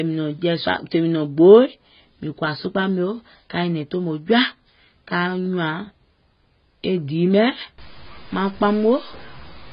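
AAC compression runs through the whole of this speech recording. Nothing is present above 5 kHz, so the voice sounds dull and muffled, and the heavy coding damage leaves a smeared, warbling quality on sustained sounds and sibilants. The likely cause is AAC-LC encoding at a very low bitrate, which fits roughly 16 kbps. At that rate the encoder cuts the top of the spectrum and starves the remaining bands, leaving them coarsely quantised and patchy. A stuck bit appears from 7.78 s to the end at 9.72 s, adding distortion over the speech and a hiss-like noise in the gaps between sounds. This is likely a single data bit held fixed at 0 or 1 in the converter or digital line. About half the samples are then wrong by that bit's weight in a pattern that follows the waveform, and because the bit also flips with the sign of small values, even near-silence is turned into noise.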